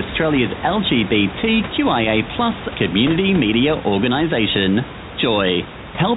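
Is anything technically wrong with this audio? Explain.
No, the speech comes through telephone-band G.711 coding, and the room noise sits about 13 dB beneath it, with nothing in the signal's technical state that is wrong.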